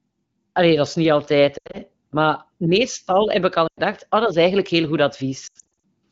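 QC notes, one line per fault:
1.58–1.78 s, 3.68–3.80 s, 5.47–5.80 s: lost AMR speech frames, after "dat is niet altijd", "meestal heb ik al" and "is eigenlijk heel goed". The decoder replays the last good frame with falling gain, so the sound warbles, dips and fades.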